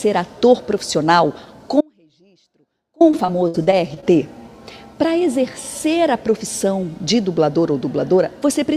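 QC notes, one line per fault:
1.81–3.01 s, audio dropout to a faint residue: the sound cuts out abruptly for about 1.2 s and returns just as suddenly. Only a faint leak remains, roughly 35 dB below normal level. This is likely a signal break ahead of a path that stayed live.
3.11–4.04 s, repeated packet loss (robotic sound): a run of short holes, the longest about 60 ms, gives choppy sound. Each hole is patched by extending the preceding audio, and about 18% of this stretch is concealed material rather than real signal.
8.43 s, dropped buffer (overrun): a small forward jump in the sound, with no silence at the join. Only a millisecond or two goes missing, which points to a likely overrun where samples were overwritten before being read and the two sides were butted together.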